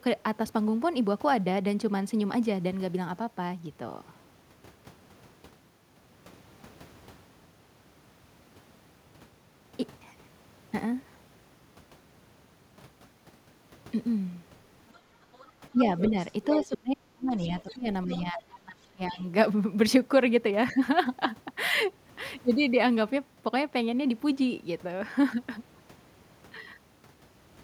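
From 14.95 to 14.99 s and 15.34 to 15.51 s, faint scraps of the other side's voice leak through, about 30 to 35 dB under the speech, likely left behind by an echo canceller that missed part of the loudspeaker signal. Unlike a dropout, a separate voice is added rather than the talker's being removed. The leak returns much louder, around 10 dB under the speech, from 15.98 to 16.77 s, then at 17.60 to 17.74 s and 18.12 to 18.43 s, about 20 and 15 dB under. Meanwhile, speech is suppressed in double talk from 15.72 to 16.14 s and again from 16.60 to 19.21 s, likely because the canceller ducked everything while both sides spoke. The talker's voice sinks by up to roughly 35 dB in pieces, but unlike a network gap it tracks the overlapping far-end speech.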